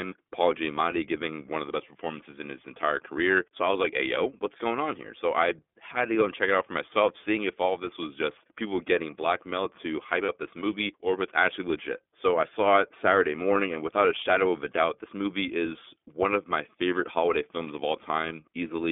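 iLBC codec, throughout: the speech is confined to a narrow band of roughly 250 Hz to 3.5 kHz and sounds plainly rough and synthetic, because each frame's excitation is coded on its own at a low rate, which fits the 13.33 kbps, 30 ms mode.

Lost iLBC frames, 10.25 to 10.31 s: just after "getting blackmailed to hype", a 30 ms gap, pointing to a single lost frame, is filled by repeating the last pitch cycle with added noise. It sounds like a brief buzzy held vowel, and the voice recovers at once on "this movie or if".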